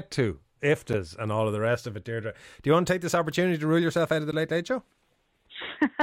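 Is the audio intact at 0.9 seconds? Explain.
No. At 0.93 s a block of digital silence lasting about 8.7 ms replaces the speech with zeros, and the abrupt edges produce a brief tick.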